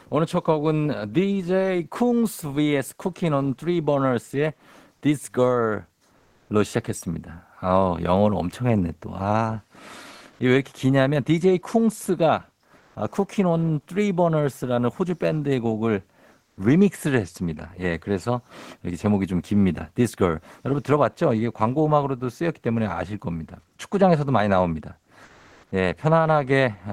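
Speech in which the sender's voice detector likely halted transmission during pauses, so the receiver substituted comfort noise in place of the background: flat, featureless hiss at 6.17–6.49 s, 10.31–10.39 s (about 4 dB louder), 12.77–12.95 s and 16.45–16.57 s. At 25.23–25.71 s the detector likely mistook speech for background, and sound dropped by the voice detector gives way to steady noise or near silence, with 300 ms of speech lost.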